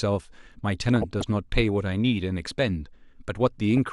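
Throughout the speech, a low-bitrate MPEG Layer II coder, likely MP2 compression at around 80 kbps, has switched off upper sub-bands and quantised the rest coarsely. The result is a dull, band-limited sound with a plainly audible gurgling, granular texture. From 0.96 to 1.23 s, and again from 3.68 to 3.78 s, DAB burbling appears: bit errors at a fraction of a percent have slipped through error correction into the audio frames, putting short blips of noise into individual sub-bands.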